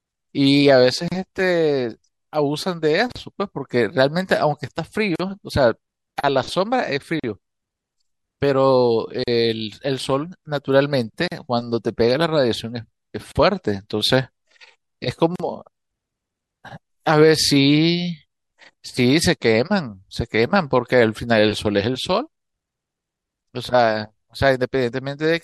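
Starting at 1.08 s, the speech drops into short silences at 1.08, 3.12, 5.16, 7.20, 9.24, 11.28, 13.32 and 15.36 s. The first lasts about 34 ms and the rest 40 ms each. These are gaps at the joins of encoded pieces. Segments roughly 2 s long were encoded separately and butted together without trimming, leaving each run's start-up delay and final-frame padding in place. Each gap has edges smeared by the codec, before the speech resumes where it stopped.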